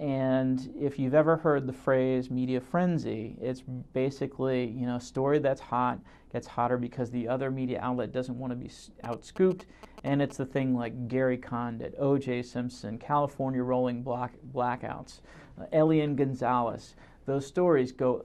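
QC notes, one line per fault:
9.04–10.32 s, GSM signalling bursts: a galloping dit-dit-dit run of short buzzes at about 217 Hz, sitting roughly 15 dB below the programme. A nearby 2G phone was sending brief signalling bursts, and the audio circuitry rectified that radio energy into audible buzzes.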